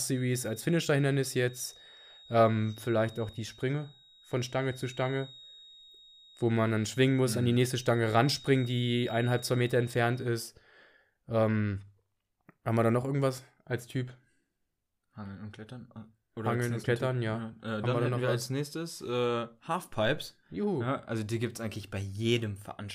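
From the start to 10.39 s, a thin, steady feedback whistle sits at 3.8 kHz, roughly 25 dB under the speech. It swells and fades slowly in level but never grows. A loudspeaker-to-microphone loop is likely holding right at the edge of feedback, sustaining this one tone.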